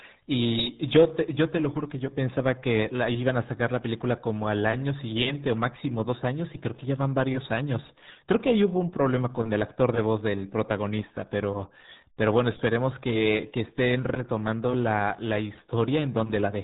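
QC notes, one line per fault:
Throughout: RealAudio 14.4 codec. The speech is heavily damaged, muffled and gargly, with nothing above 3.9 kHz, so sibilants and consonant edges vanish and vowels take on a wet, bubbling texture. The sound points to a very low bitrate, around 8 kbit/s, where a dial-up-era speech coder models the voice crudely rather than preserving the waveform. What sets it apart from a plain low-pass filter is the gargle: the damage lies in the voice itself, not just in missing treble.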